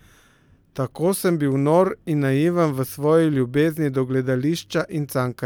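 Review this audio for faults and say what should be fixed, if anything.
Nothing to fix: no faults found in this speech recording.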